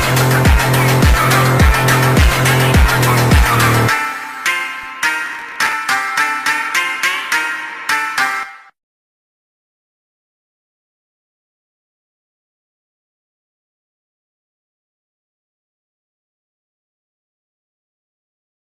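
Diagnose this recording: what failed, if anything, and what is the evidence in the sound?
A processor overload crackle is in the driver and buffer stage, from 5.26 to 5.73 s. For about half a second a gritty, tearing crackle rides on the sound and then stops cleanly. The processor repeatedly missed its deadlines for short buffers of a few milliseconds each, around twenty of them. Each missed slot replayed stale audio with hard edges. Unlike a loose-cable crackle, it is tightly confined to one burst. Unlike network loss, it comes as dense crackle rather than gaps.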